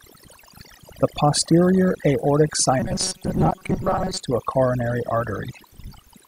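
Across the whole recording, overdone noise removal has pushed individual frequency bands down to nothing wherever they sat close to the estimated noise floor. The gaps between phrases drop to near silence with twinkling specks. A spectrogram shows a blank background scattered with isolated dots and ragged holes in the quieter speech harmonics.

From 2.80 to 4.2 s, just after "posterior aortic" and up to "to a coronary", the voice becomes a rigid metallic buzz at 188 Hz. This is robotic sound, likely from repeated short buffers: roughly half the audio is replaced by repeats of a segment of about 5.3 ms. The waveform shows one short shape copied end to end, and the spectrogram shows evenly spaced horizontal lines at multiples of 188 Hz.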